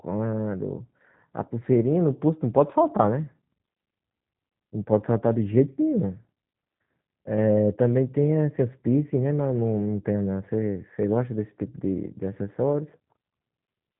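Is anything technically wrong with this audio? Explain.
Yes. The speech carries G.729 codec damage from start to finish, and it is plainly audible. G.729 does not store the waveform. It rebuilds each 10 ms frame from a vocal tract filter, a pitch predictor and a few pulses per half-frame. That fits an 8 kbit/s G.729A stream. Nothing above about 3.8 kHz survives, so the sound is dull and boxy. The voice stays intelligible but comes across rough and faintly synthetic.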